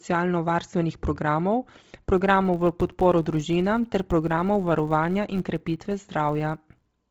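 From the start, the speech has a breathy, grainy edge. This is heavy codec damage, likely from Bluetooth LC3 compression at a low bitrate. The empty upper spectrum is partly refilled with noise, which gives a hiss-like texture rather than the watery swirl of other codecs.

From 2.16 s to the end, a filter restarted on every block starts each block from silence, so each block begins with a small transient. The result is a 93.8 Hz buzz, which fits a 512-sample buffer. Unlike mains hum, it rises and falls with the speech level.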